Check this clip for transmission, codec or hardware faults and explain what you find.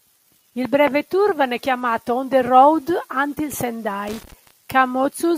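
There is one hardware fault here: a burst of loose connector crackle from 4.07 to 4.51 s, near the end of the clip. For roughly 0.43 s the signal is broken by an irregular scratching and crackling. A worn or dirty contact in the signal path is shifting and repeatedly opening and closing, so the audio is chopped on and off in rapid, uneven steps. Any DC present on the line turns each break into a pop.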